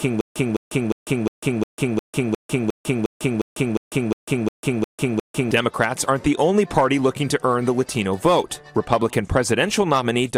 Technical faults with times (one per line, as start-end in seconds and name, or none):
0.00-5.51 stutter with silent gaps